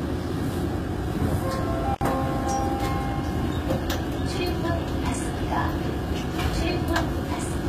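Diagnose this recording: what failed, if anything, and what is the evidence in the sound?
The codec stage did audible damage throughout: the top end is gritty and metallic, with nothing above 14.9 kHz. That's likely HE-AAC compression at a very low rate, around 20 kbps, where the treble is copied up from lower bands, so its harmonics don't line up.

There's an intermittent contact in the analogue wiring at 1.94 s: a loose plug or cable opens for about 64 ms, until 2.01 s. The sound drops out with a crackle at each edge, leaving faint hiss while the line is open.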